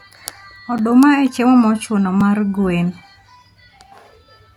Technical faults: block of digital silence

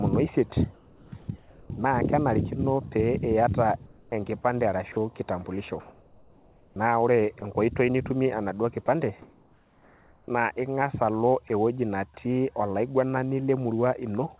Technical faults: comfort noise in place of the background; sound dropped by the voice detector; sound chopped by the voice detector

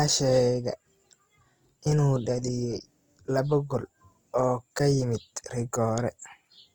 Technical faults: Opus compression

